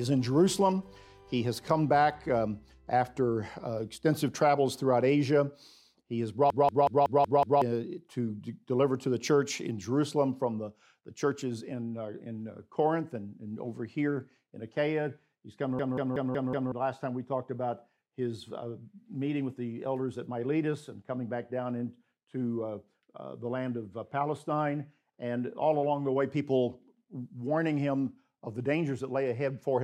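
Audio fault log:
6.50–7.62 s and 15.79–16.72 s, system hang loop: the playback system froze while the hardware kept replaying its ring buffer, so one 186 ms slice repeats exactly, six times and then five, at about 5.4 per second. This fits an 8192-sample buffer. The long loop gives a machine-gun stutter rather than a buzz, and about a second of audio is lost each time. The waveform shows identical repeating blocks, and the spectrogram shows vertical seams at each restart.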